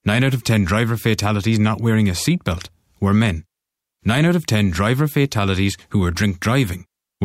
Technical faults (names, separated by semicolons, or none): none